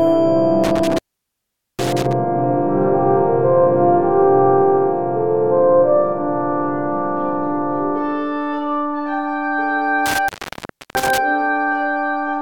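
Intermittent contact interrupts the sound twice, from 0.64 to 2.13 s (open for 0.81 s) and from 10.06 to 11.18 s (open for 0.67 s). A loose cable or plug briefly breaks the signal path, so the audio drops to faint hiss with crackle at each edge.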